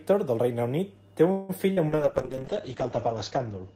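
A speech recording runs through three call faults in quick succession. From 1.31 to 1.51 s the sound stalls into a fading synthetic buzz for about 0.18 s, then picks up exactly where it left off with nothing skipped. This is a call audio freeze, likely from packets held up in transit until the jitter buffer ran dry, adding about 176 ms of delay. From 1.73 to 1.79 s there is a brief smeared wobble where roughly 40 ms never arrived. This is short concealed packet loss: the receiver extended the preceding sound to bridge the hole, then blended back into the real signal. From 1.90 s to the end, the voice turns coarse, watery and dull. This is a call bitrate drop from 48 to 8 kbps, which narrowed the audio band from 20 kHz to 8 kHz and stayed at its lowest for about 1.4 s.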